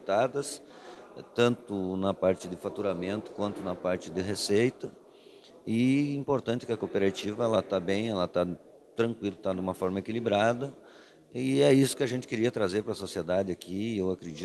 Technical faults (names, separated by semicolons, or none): clock drift between sender and receiver; repeated timing corrections